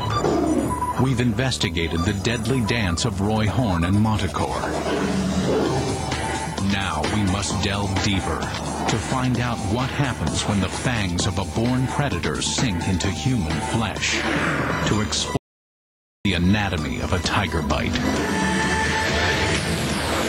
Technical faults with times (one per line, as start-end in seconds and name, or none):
0.00-20.29 video or display buzz
15.37-16.25 audio dropout to silence